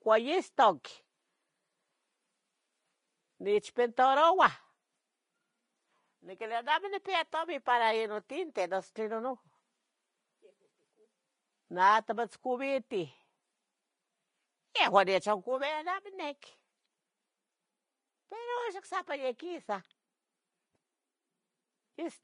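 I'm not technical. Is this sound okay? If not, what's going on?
No, the speech carries plainly audible compression damage from start to finish. The upper treble is gone entirely, with nothing above about 10.5 kHz, so the sound is duller than it should be. What high detail remains has turned hissy and grainy, and sharp starts of sounds are softened. This is likely Vorbis compression at a low quality setting, which squeezes the file by coarsely approximating the treble and replacing fine detail with noise.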